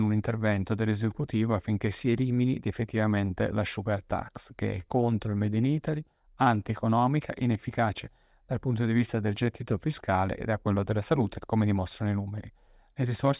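Nothing technically wrong turns up anywhere in this stretch of speech, so there's no fault to point to and no time or cause to give.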